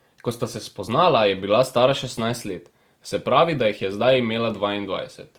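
Opus compression, throughout: the speech turns rough and grainy, with noisy filled-in bands, likely from Opus music-mode coding at a rate that fits 24 kbps.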